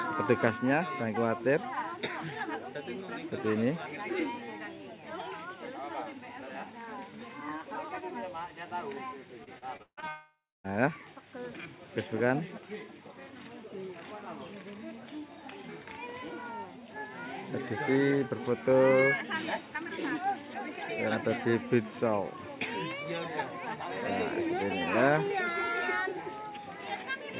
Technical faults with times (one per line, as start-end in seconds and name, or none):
9.44-10.05 repeated packet loss (robotic sound)
10.08-10.67 long network dropout